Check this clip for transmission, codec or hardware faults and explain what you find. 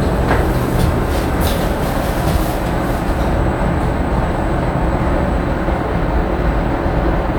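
Nothing in this clip points to a transmission, codec or hardware fault. The sound carries on without any break, glitch or other disturbance that could be traced to the signal path.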